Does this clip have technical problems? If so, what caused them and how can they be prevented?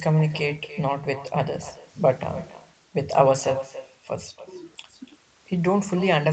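Yes. Echo with no canceller runs throughout: each phrase returns roughly a third of a second later, about 15 dB quieter. Enabling acoustic echo cancellation at the far end prevents it.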